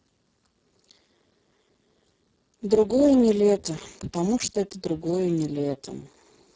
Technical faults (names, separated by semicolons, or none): Speex codec